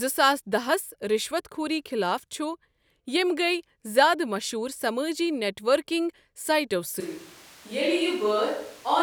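At 7.00 s the speech abruptly turns roomy and hollow, with the low end thinned out, and stays that way to the end of the clip. The level falls by about 5 dB, and background room noise becomes more prominent, sitting roughly 25 dB below the speech. The sudden change in tone and ambience points to a likely switch to a distant microphone, after the close microphone's signal dropped out or was not used.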